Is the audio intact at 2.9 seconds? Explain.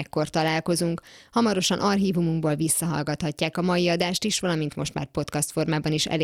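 No. At 2.9 seconds the speech carries periodic clock jitter, present throughout. Interference wobbling the converter clock around 100 Hz adds sidebands at that spacing, giving a rough, metallic edge strongest on high frequencies. Unlike mains hum, it disappears in pauses.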